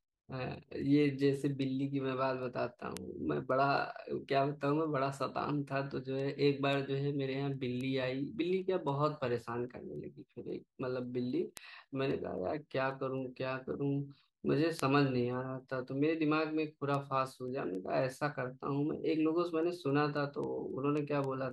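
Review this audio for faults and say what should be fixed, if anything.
Word clock ticks, 0.28 to 21.51 s: ticks about every 0.3 s as the receiver's unlocked clock slips, dropping or repeating one sample. Lock the receiving device to the source's word clock, or resample at its input, so the two clocks cannot drift apart.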